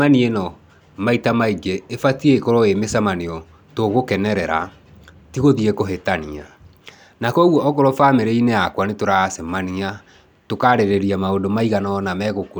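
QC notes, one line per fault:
Nothing to flag here, and I heard no problems anywhere in the recording.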